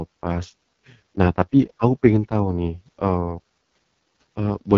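Speech clip carrying AMR wideband (HD Voice) codec damage from start to finish, and it is heavy. The band stops at about 7.3 kHz, with the top region above 6.4 kHz filled by shaped noise rather than real detail. The speech sounds rough and raspy where the pulse-driven vocal tract model runs out of bits. That degree of coarseness fits the lowest AMR-WB mode, around 6.6 kbit/s.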